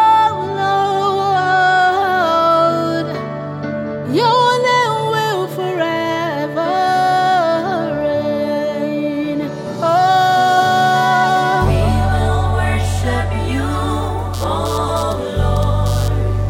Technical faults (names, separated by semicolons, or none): computer activity noise